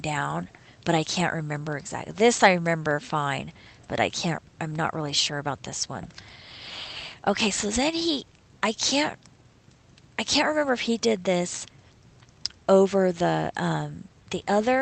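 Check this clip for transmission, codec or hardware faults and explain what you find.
No faults are present; the signal carries only the ordinary coding character of a call path, with its content ending at 8 kHz, which fits Opus coding at around 24 kbps.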